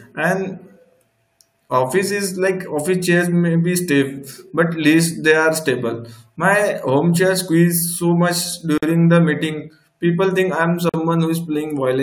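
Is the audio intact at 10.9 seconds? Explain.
No. From 10.89 to 10.94 s, just after "think I'm", the speech stops for about 46 ms: a gap at a join of encoded pieces. Two separately encoded segments were spliced without trimming, so the first one's padded final frame and the next one's start-up delay both remain as silence. The edges are smeared by the codec, and the speech resumes exactly where it left off, with nothing missing, unlike a dropout that swallows part of the sound.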